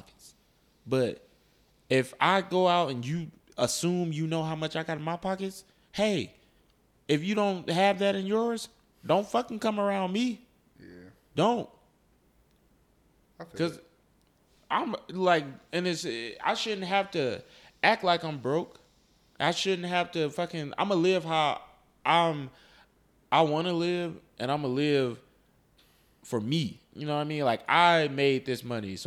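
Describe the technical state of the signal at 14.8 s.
At 14.8 s the speech signal is intact, with no audible fault at that moment.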